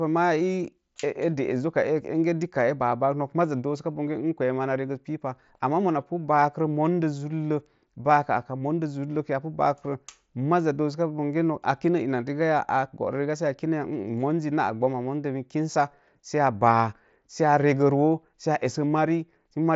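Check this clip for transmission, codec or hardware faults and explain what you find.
No transmission, codec or hardware faults found in this speech clip, which comes over a Bluetooth mSBC headset link with the expected band limit near 7.7 kHz and only the light grain that codec leaves.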